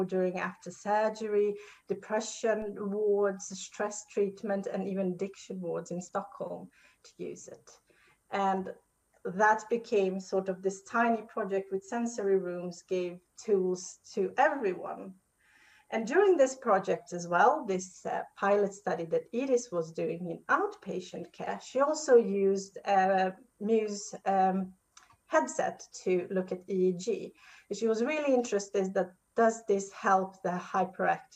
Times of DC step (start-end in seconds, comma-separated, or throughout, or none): 2.62